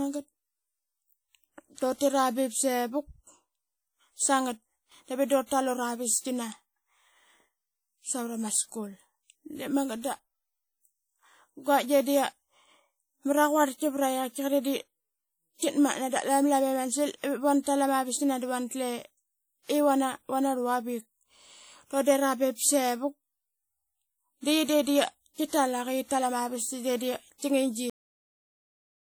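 From the start, the speech carries a ringing, washy quality and a hiss that swells and fades with the voice, while the bandwidth still reaches about 20.1 kHz. This is likely WMA compression, with long transform blocks smearing quantisation noise, which fits a rate near 48 kbps.

At 27.90 s the audio stops abruptly mid-sound and drops straight into digital silence with no natural decay. This is a cut-off end: the final buffers were never written or played back, so the remaining stretch is simply missing.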